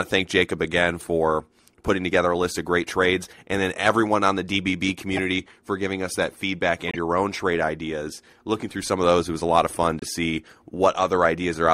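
At 3.87 to 3.90 s, between "great trades and then" and "on the", a short crackle sits on a speech peak. This is hard clipping: the signal overshoots what the stage can pass by about 3 dB, so the waveform tops are sliced flat, and those flat edges throw harmonics high into the spectrum. A second, milder crackle at 11.23 to 11.25 s comes from the same flattening, overdriven by only about 1 dB.

At 5.14 to 5.19 s, just before "for giving us that", a brief squeaky blip cuts through, reaching roughly -15 dBFS. This is a corrupt frame decoded. Flipped bits in the compressed data made the decoder rebuild the audio with wrong gains or misread codes, scattering energy at wrong frequencies. Its length fits a single damaged frame. A longer, quieter chirp at 6.88 to 6.97 s, around -20 dBFS, points to several consecutive bad frames. After "of fun", at 9.99 to 10.05 s, another burst near -15 dBFS suggests about two.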